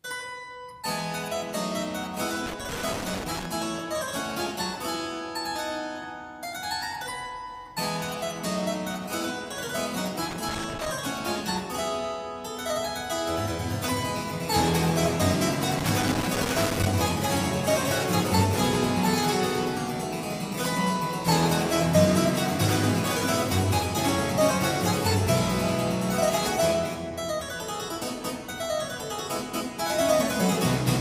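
Irregular bursts of crackle and scratching break up the sound from 2.46 to 3.46 s, 10.31 to 10.90 s and 15.79 to 16.89 s. This is loose connector crackle: a worn or dirty contact keeps making and breaking, chopping the signal into ragged fragments.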